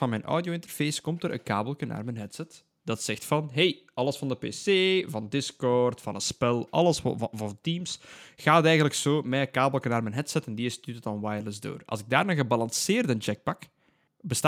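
Speech recording with no technical faults to report.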